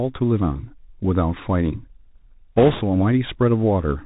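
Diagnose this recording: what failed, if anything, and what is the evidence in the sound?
The whole clip has been through a Bluetooth CVSD headset codec, so it's a codec-stage problem from start to finish. Nothing comes through above about 4 kHz, the s sounds come out scratchy, and there's a grainy hiss sitting under the speech. That's the one-bit up/down coder at work: its step size can't keep up with fast, loud high-frequency movement, so it slope-overloads. The damage is plainly audible and fits a 64 kbps CVSD link.

On top of that, there are bit errors on the Bluetooth voice link from about 2.56 to 2.83 s, which puts this one at the radio/transport stage. For that quarter-second the speech picks up a rushing, crackly roughness with no hard clicks. That's what you'd expect from CVSD, where no bit outweighs the others, each flipped bit pushes the waveform one step whose size grows with the speech level, and the error fades out quickly. 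The amount of crackle points to an error rate of a few percent over that stretch.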